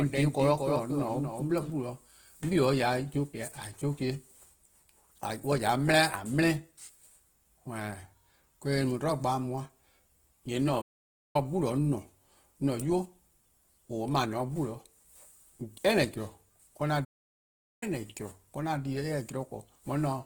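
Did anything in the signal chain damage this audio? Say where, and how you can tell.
Yes. At the codec stage, the whole clip carries Opus compression. The speech sounds rough and grainy, with noisy texture where tones should be clean, yet the bandwidth stays full. That points to the music (CELT) mode at a starved rate, which fits around 16 kbps, filling bands with noise.

At the playback or capture stage, a doubled audio track runs from the start until 1.7 s. A second full-band copy, about 5 dB quieter, trails roughly a fifth of a second behind with no room colour, then cuts off abruptly. The likely cause is a slower second path capturing the same signal.

At the playback stage, there are two playback stalls. The audio drops to silence mid-flow from 10.81 to 11.36 s (about 0.53 s) and from 17.04 to 17.83 s (about 0.77 s), then resumes. This is likely the player starving for data or its thread blocking.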